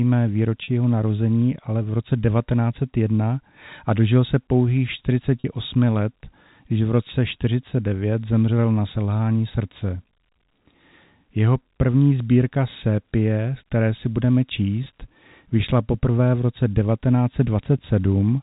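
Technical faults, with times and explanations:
0.64–0.68 s, 5.40–5.44 s and 14.84–14.86 s: packet loss with pitch repetition. Gaps of 40, 40 and 20 ms fall just before "jeho narození ale v", between "a dožil se pouhých" and "let když v roce", and just after "které si budeme". The receiver fills each gap by repeating the last pitch period, so the sound briefly holds with a slight buzz instead of dropping out. The gap lengths fit two, two and one lost 20 ms packets, heard over the band-limited G.711 telephone coding.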